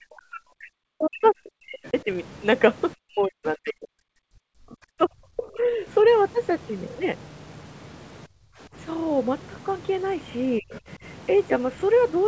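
From 0 to 2.07 s, the echo canceller likely mistook overlapping talk for loudspeaker echo and pulled the microphone down along with it. This is speech suppressed in double talk. For about a second and a half of that span, the speech dips and breaks into pieces, sinking by something like 40 dB at its deepest.

Inside the same stretch, at 1.24 s and again at 1.84 s, the canceller likely left part of the loudspeaker signal in the microphone feed, so the other side's voice leaks through. Each leak is a brief scrap of a second voice, lasting about 40 to 50 ms. It sits well under the talker, roughly 20 dB down at the first and 30 dB down at the second.

Between 2.95 and 5.87 s, double-talk suppression likely strikes again. Around two seconds of speech is ducked and chopped, and the deepest cuts reach roughly 40 dB.

At 8.27 s the echo canceller gates the background, clamping the microphone while the loudspeaker plays. 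For 0.3 s the room sound falls by about 25 dB and then returns at 8.59 s.

Near the end, a short double-talk suppression from 10.59 to 10.71 s likely takes about a tenth of a second of speech down by roughly 30 dB. Right after it, from 10.71 to 10.78 s, the far-end voice leaks through faintly, about 25 dB below the speech.

Throughout the clip, the audio band stops at 8 kHz, which fits a G.722 call path at 64 kbps.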